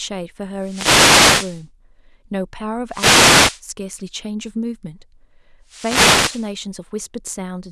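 Wireless microphone noise hits at 0.59–1.66 s, 2.88–3.62 s and 5.66–6.53 s: radio fades let receiver static swish over the speech, unlike steady hiss or clean digital dropouts.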